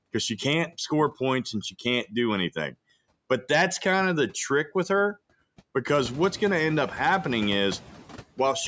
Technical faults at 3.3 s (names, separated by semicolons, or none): noise suppressor artifacts